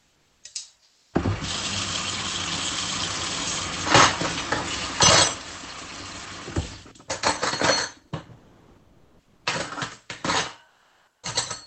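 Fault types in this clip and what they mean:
Comfort noise in place of the background: during pauses the real background gives way to steady synthetic noise, likely from Opus discontinuous transmission. It happens three times, lasting about 0.4 s, 1.1 s and 0.56 s, shifting level by about −8, +2 and −6 dB. A spectrogram shows a smooth, textureless band, and the waveform envelope goes flat.
Sound dropped by the voice detector: sound was treated as background and replaced with comfort noise, likely by Opus DTX, at 0.83–1.13 s, losing about 140 ms of sound, and briefly at 6.87 s. A spectrogram shows detailed energy ending abruptly in uniform noise, and the waveform envelope flattening.
Onset clipped by the voice detector: the sound resuming near 11.18 s is missing its first 50 ms, likely because Opus DTX detected it late. The waveform jumps straight from comfort-noise level into the sound. 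The spectrogram shows a hard vertical edge with no gradual build-up, within the 8 kHz band.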